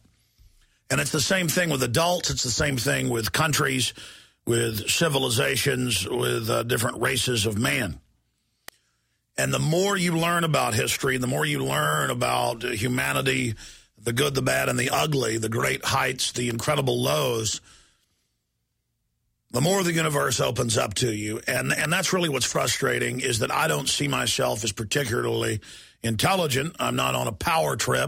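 A nearby switch or motor likely arced into the audio line, producing electrical switching spikes: sharp snaps at 8.68, 16.51 and 21.85 s, the last loudest near -10 dBFS.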